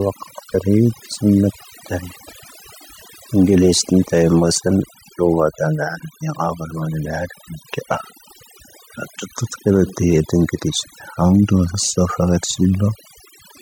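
Overdone noise removal runs through the whole clip. The suppressor was set too aggressively, shutting off individual frequency bands whenever they came close to its noise estimate, so the background drops and breaks up into twinkling specks. On a spectrogram this shows as a patchy, moth-eaten texture with isolated bright dots scattered through the gaps.

Compressed frames skipped occur at 0.54 s and again at 5.95 s, each jumping the audio forward by about 20 ms. Whole coded frames were dropped. The waveform shows a discontinuity at each join, with a short vertical mark on the spectrogram.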